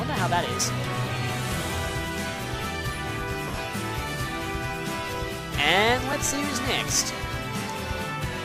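Lost LE Audio frames affect this audio at 3.48 to 3.58 s and at 6.12 s. Across the first 100 ms, about 70 ms goes missing in short gaps, the longest around 30 ms, fitting several 10 ms frames. The decoder fills each gap with a randomised copy of the last spectrum, heard as a brief noisy smear and shown on a spectrogram as blurred, patchy energy.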